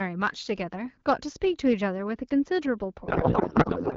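Speech carried over an AMR wideband (HD Voice) link, with band-limited clarity that fits a rate around 12.65 kbit/s, has two faults. From 1.66 to 1.73 s there is hard clipping. Overdriven by about 2 dB, the peaks are sliced flat, giving a brief crackle. On a waveform the tops sit level against a ceiling, and a spectrogram shows a short burst of harmonics reaching up the band. From 3.05 s to the end there is a codec payload misread. The garbling fits octet-aligned AMR being read as bandwidth-efficient, so the decoder pulls fields from the wrong bit positions. The speech turns into warbling, noisy garble that barely tracks it. A spectrogram loses its harmonic striping and shows smeared noise.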